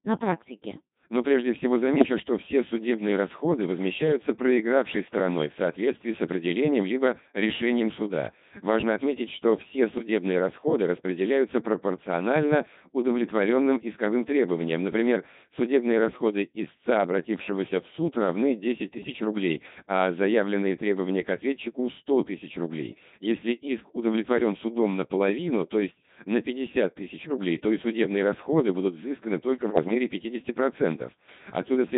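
Throughout, the speech passes through a Codec 2 vocoder at 2.4 kbit/s and is heavily damaged. It is rebuilt from pitch and spectral parameters, so it sounds buzzy and robotic rather than muffled or smeared.

Bit errors on digital voice radio hit at 1.96–2.20, 9.98–10.08, 18.94–19.20, 27.20–27.37 and 29.62–29.95 s, at a few percent error rate. Corrupted frame parameters make pitch, level and tone lurch into bleeps and warbles, unlike dropouts, which leave silence or gaps.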